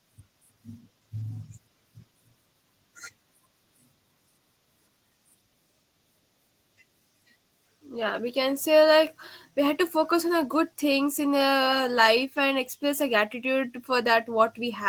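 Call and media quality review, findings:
No transport, device or processing fault is audible anywhere in the speech signal.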